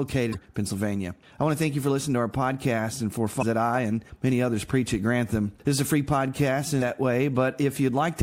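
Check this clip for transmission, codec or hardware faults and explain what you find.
Two short glitches stand out, both caused by damaged data in a compressed stream. At 0.30 to 0.35 s and again at 3.39 to 3.43 s, the audio breaks into a brief glitch of roughly 40 ms. Part of the compressed data there was lost, zeroed or overwritten, so the decoder misread those frames, lost sync and had to hunt for the next valid frame header before clean playback resumed.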